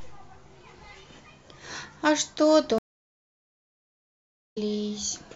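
At 2.78 s the speech just drops out, and you get about 1.75 s of dead silence before it comes back at 4.58 s. That's a stream reconnect: the connection broke, the player went quiet, reconnected and spun up a fresh decoder partway through the stream. When the speech returns it has skipped ahead by roughly a second, so a chunk of the talk is simply gone rather than delayed.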